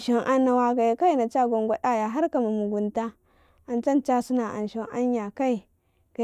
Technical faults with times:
none

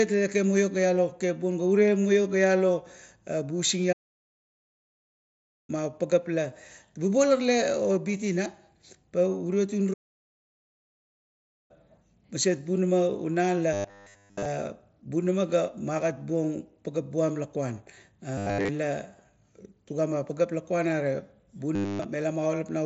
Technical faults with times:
3.92-5.70 playback stall
9.93-11.71 playback stall
13.73-14.45 robotic sound from repeated short buffers
18.38-18.69 robotic sound from repeated short buffers
21.75-22.06 robotic sound from repeated short buffers

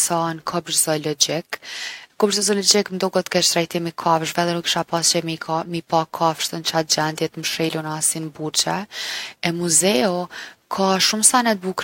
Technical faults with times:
none

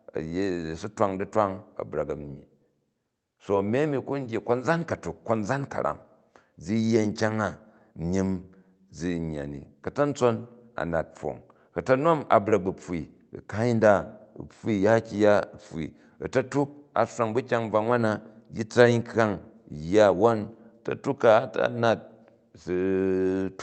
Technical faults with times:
none

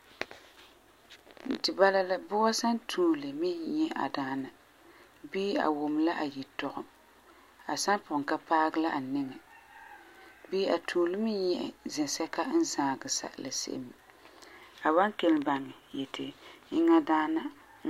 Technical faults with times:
none

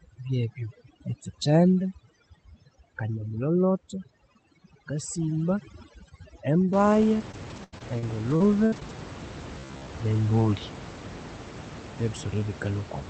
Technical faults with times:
0.00-6.73 overdone noise removal
6.93-8.97 repeated packet loss (robotic sound)

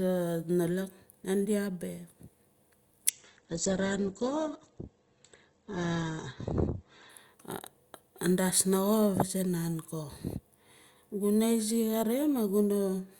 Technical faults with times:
3.10-7.10 adaptive stream at a lower bitrate

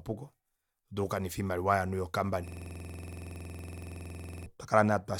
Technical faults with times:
2.48-4.46 system hang loop

